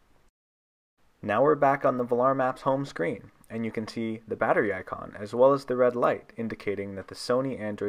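No technical faults can be heard in this clip. There is nothing here that needs a timestamp or a second listen.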